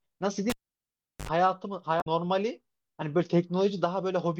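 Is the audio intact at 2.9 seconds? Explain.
Yes, the audio is intact at 2.9 seconds, with no fault at that moment.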